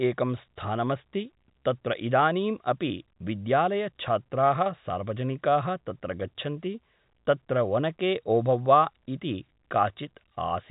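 No faults are present in the speech; the G.711 telephone coding band-limits it to roughly 3.8 kHz, as expected for that path.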